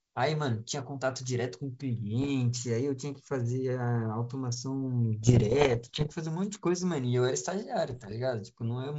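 Speech carried over G.722 wideband coding, whose upper band sounds typical of a 64 kbit/s link, is hit by bit errors on an ADPCM link at 2.20–2.31 s, 5.23–6.13 s and 7.88–8.14 s, at error rates of roughly 0.7, 1.0 and 1.0 percent. Each flipped bit throws off the decoder's step size and predictor, so instead of clean dropouts, as packet loss would leave, there are pops and rough bursts with brief level jumps.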